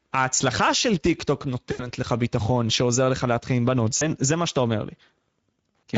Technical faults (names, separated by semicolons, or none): Speex codec; VoIP packet loss concealed by the speech codec